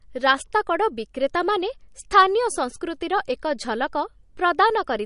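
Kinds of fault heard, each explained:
MP3 compression: throughout the speech, nothing survives above 10.6 kHz and the sound turns plainly watery and swirly, likely from an MP3 encoder starved of bits, which fits a rate near 40 kbps, cutting the treble and switching weak frequency lines on and off between frames.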